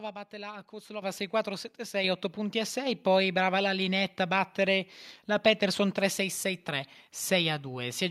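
At 1.02 s, just after "batte la", the microphone volume stepped up by about 9 dB, and at 2.04 s it rose again by about 5 dB. The call software judged the input too quiet and raised the device's input level in single jumps. The speech and the background noise floor both lift at the same instant and stay there. That shared, sustained rise is what separates it from a talker simply getting louder.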